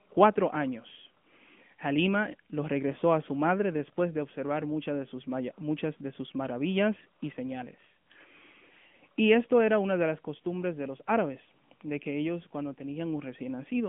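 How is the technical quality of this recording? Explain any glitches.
The recording is limited by AMR narrowband mobile codec coding across its whole length. The speech is squeezed into roughly 150 Hz to 3.4 kHz, with nothing above 3.5 kHz, and the plainly audible damage fits the 10.2 kbps mode. A vocal-tract model rebuilds each frame from a few pulses, giving a buzzy, synthetic, muffled telephone sound. On a spectrogram there is a flat ceiling near 3.5 kHz and little energy below 150 Hz.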